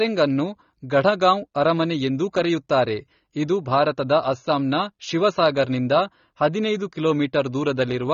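Throughout, the speech has audible AAC compression, likely a low-bitrate encode: sibilants warble and smear, and a spectrogram shows nothing above a 20.4 kHz cut-off.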